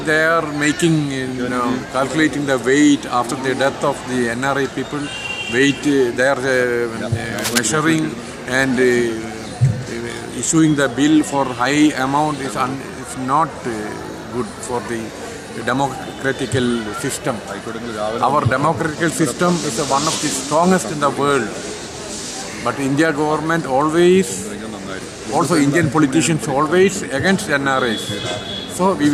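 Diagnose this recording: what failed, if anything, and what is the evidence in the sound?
Analogue wiring: there's cable scratch noise from 7.38 to 7.58 s, a ragged crackle just a few dB under the sound, likely a worn connector's contact shifting.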